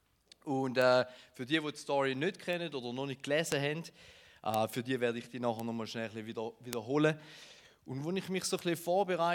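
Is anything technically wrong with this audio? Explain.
Yes. Bit error spikes click at 0.82, 2.53, 3.52, 4.54, 5.60, 6.73 and 8.59 s. Each is a flipped digital bit that jumps one to three samples to about −24 to −12 dBFS, heard as a sharp tick, a lone waveform needle and a full-height spectrogram stripe.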